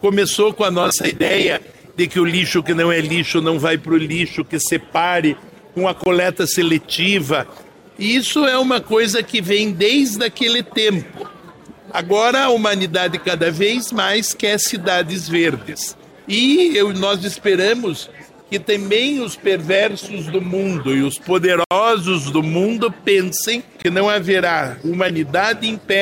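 At 6.04 s, from 21.64 to 21.71 s, and at 23.82 s the audio drops into a block of digital silence: samples replaced outright by zeros, as when output buffers go unfilled in time. The 23 ms gaps each fit one 1024-sample buffer, and the 70 ms gap is about three. Unlike a faded dropout or a lone click, the sound stops dead and restarts with no ramp, and the longer gap is heard as a distinct hole.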